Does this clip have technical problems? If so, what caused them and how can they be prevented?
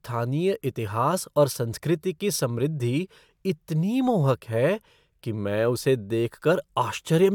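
No, nothing in this speech recording stood out as a technical problem on listening, so there is nothing here that needs preventing.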